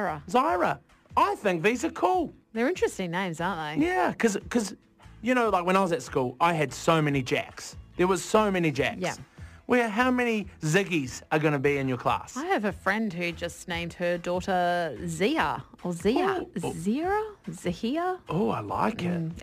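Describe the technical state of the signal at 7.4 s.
At 7.4 s, as through the whole clip, the signal carries crude rate conversion: samples were simply dropped or repeated instead of filtered, which fits a 48 kHz to 44.1 kHz change. The error, roughly 30 dB below the signal, adds a gritty, inharmonic fizz that tracks loud and high sounds.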